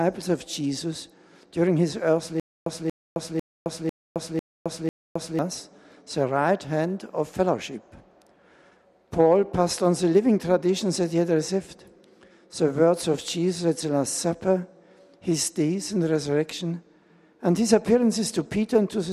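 From 2.40 s to 5.39 s there is a stutter with silent gaps: a 234 ms burst repeats six times, each followed by 265 ms of digital silence, a steady 498 ms cycle. This likely comes from a stalled stream replaying its last fragment, and the intervening audio is lost.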